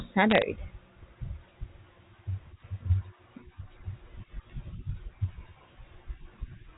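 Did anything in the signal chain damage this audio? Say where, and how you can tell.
Yes. Bit errors on a digital phone line, around 0.30 to 0.42 s, cause sharp ticks over the speech. Flipped sign or high bits in the G.711 A-law stream corrupt single samples, at an error rate near 0.4 percent.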